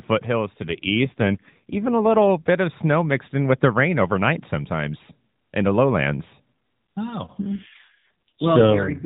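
From 0.62 to 2.30 s, and again from 7.44 s to the end, the speech turns rougher and more synthetic, with no gap and no narrowing of the band. This is an AMR rate drop: the mobile codec, cued by a weak radio link, falls back to fewer bits per frame, which fits a step down from 12.2 to 5.9 kbps.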